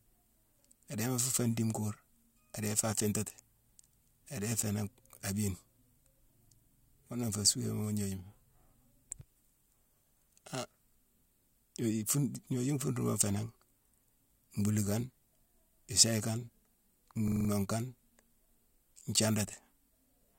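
At 17.28 s the speech hits a system hang loop. The system stalled while the hardware kept replaying one 42.7 ms slice, which fits a 2048-sample buffer. It repeats five times at 23.4 Hz until 17.49 s, giving a quick rattling stutter.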